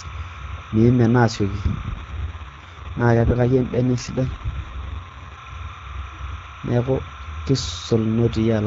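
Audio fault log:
throughout: timecode bleed. A steady chirping warble sits behind the speech at roughly 15 dB below it. It switches between tones near 1 kHz and 2 kHz, the two frequencies of a linear timecode square wave. The pattern repeats at 29.97 frames per second, as code leaking in from a neighbouring track or cable would. On a spectrogram it appears as two horizontal bands alternating rapidly across the whole clip. Their odd harmonics stack above them, and they do not follow the speech at all.
1.94–5.41 s: AMR rate drop. The AMR wideband stream steps down from 12.65 to 6.6 kbit/s. At the lower rate the vocal tract model gets far fewer bits, and the speech turns rough, raspy and more synthetic. There is no gap and the bandwidth does not narrow. A spectrogram shows the same upper edge throughout, with smeared, buzzier harmonics and grainier fricatives in this span. The normal 12.65 kbit/s texture returns at 5.41 s.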